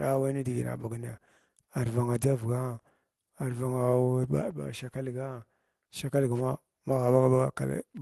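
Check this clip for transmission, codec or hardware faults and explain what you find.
No faults can be heard in the speech, which carries the usual coding texture and the high-frequency ceiling around 12 kHz that fit an Opus call path working as intended.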